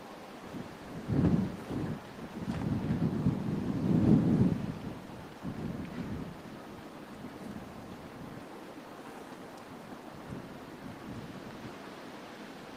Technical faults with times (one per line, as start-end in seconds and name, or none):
none